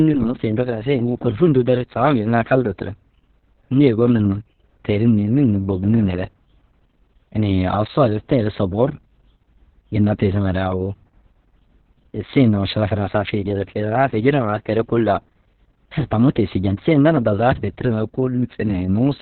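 From start to finish the speech sounds muffled, hoarse and slightly robotic, with nothing above 4.2 kHz, so consonants lose their crispness and the tone is boxed in like an old phone line. This is Opus voice compression working at its narrowband setting with the SILK linear-prediction coder, and the heavy damage fits a bitrate near 6 kbps with long 60 ms frames, where the excitation is coded too coarsely to keep the voice's natural texture.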